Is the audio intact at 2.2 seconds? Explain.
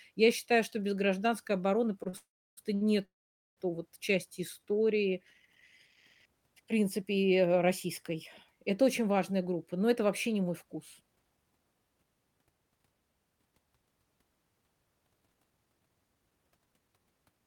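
No. At 2.2 s a call audio freeze runs from 2.17 to 2.59 s: the last sound fades into about 0.33 s of silence, likely because late packets emptied the jitter buffer. It then resumes where it stopped. This sits within repeated stalls (stutter) from 2.03 to 2.83 s, where three short gaps, the longest 60 ms, make the audio drag and stutter instead of falling into one long hush.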